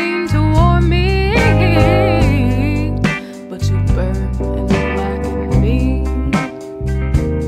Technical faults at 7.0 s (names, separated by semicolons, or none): none